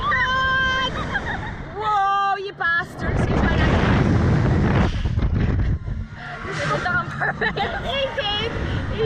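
Nothing is technically wrong with the audio.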